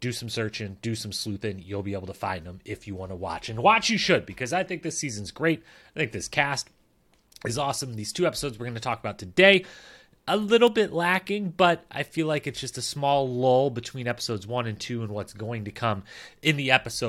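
Three bit error spikes punctuate the speech, at 10.67 s, 14.11 s and 16.48 s. Each is a flipped bit in a stored or transmitted sample that throws the value off by a power of two for one or two samples before it snaps back. The first and last peak at about -17 dBFS, the middle one lower at about -29 dBFS. Each is heard as a single sharp, broadband tick with no relation to the surrounding voice.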